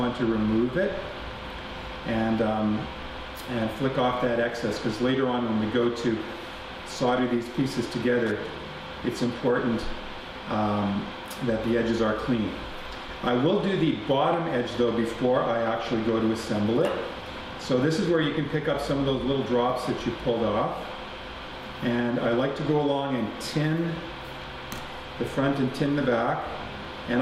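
A worn or dirty contact in the signal path made and broke repeatedly as it shifted, chopping the signal on and off between 8.26 and 8.55 s. The result is loose connector crackle, heard as an irregular burst of scratchy crackling laid over the audio for roughly 0.3 s.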